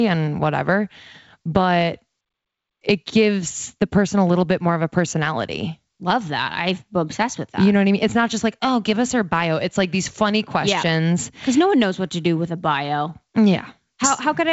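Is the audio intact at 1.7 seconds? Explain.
Yes, the speech at 1.7 seconds is intact, carried by G.722 wideband telephone coding at 64 kbit/s with nothing audible above about 7.7 kHz.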